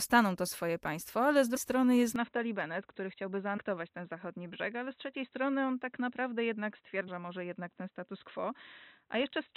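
Compressed frames skipped at 1.56 s, 3.57 s and 7.07 s: whole blocks of the coded stream never reach the output, so the audio lurches forward by multiples of a 26.1 ms frame. The jumps are roughly 400 ms, 100 ms and 150 ms. Each join is a short smeared blip rather than a click, and the first falls between "swoje państwo ale z" and "strony jest".

Input switched to a poorer device from 2.16 s to the end, likely a change to another microphone or a headset call profile. Right after "strony jest" the sound turns dull and band-limited, with nothing above 4 kHz. It drops about 5 dB with no gap at the switch, and a new noise floor sits roughly 55 dB below the signal.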